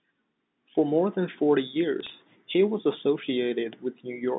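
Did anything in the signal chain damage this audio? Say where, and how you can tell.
Yes. Bit errors on the digital phone line cause sharp ticks and crackle from 2.00 to 2.12 s. Single flipped bits, roughly 1.5 in a thousand, corrupt individual samples while the surrounding speech stays unchanged.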